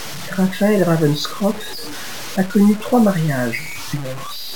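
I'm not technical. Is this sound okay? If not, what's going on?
No. Low bit depth without dither runs through the whole speech clip, from start to finish. Quiet parts sound gritty and sandy, and the softest moments break up or crackle. The likely cause is the audio being stored with very few steps of loudness, about 5 bits, and simply chopped to fit.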